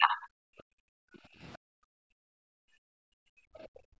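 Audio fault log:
0.00–0.19 s, speech suppressed in double talk: the talker is pulled down by roughly 30 dB right at the start, a dip lasting about a fifth of a second, so the opening sound is thinned and partly swallowed. The likely cause is double talk, with both ends active at once and the echo canceller, unable to tell near-end speech from loudspeaker echo, attenuating everything it hears.
0.47–1.42 s and 1.58–4.00 s, background gated by the echo canceller: in two long stretches, about a second and then about two seconds, the room sound sinks by up to about 40 dB and goes nearly silent, recovering briefly between 1.42 and 1.58 s. While the loudspeaker path was active, the canceller's suppressor clamped the microphone hard, so the ambient floor drops out.
3.63–3.68 s, other side's voice leaking through: a brief scrap of the far-end voice surfaces for about 50 ms, very faint at roughly 40 dB below the talker. 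Its low level and short length mark it as residual echo. The likely cause is the loudspeaker signal reaching the microphone and not being fully removed by the canceller. Call microphone processing is also audible, limiting the band to 8 kHz.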